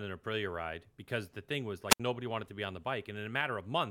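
At 1.89 s the radio link from an analogue FM wireless microphone weakens far enough that the receiver's squelch cuts the output, a wireless microphone squelch dropout lasting until about 2.00 s. As the carrier fades, hiss briefly rises, then the squelch opens a hole of near silence of roughly 70 ms before the link recovers and the speech resumes, leaving a short, abrupt gap in the middle of the talking.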